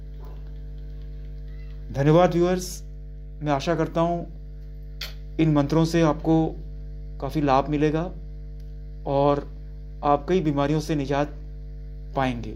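A steady mains hum at 50 Hz runs under the sound from start to finish. It sits only about 15 dB below the signal, so it is clearly audible. The power line is leaking into the signal path, through a ground loop or a nearby transformer.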